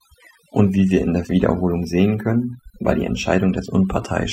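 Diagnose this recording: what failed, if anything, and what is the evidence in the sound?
Overdone noise removal at the processing stage: throughout, the background drops and breaks up into twinkling specks. Unlike codec artefacts, the damage follows the noise floor.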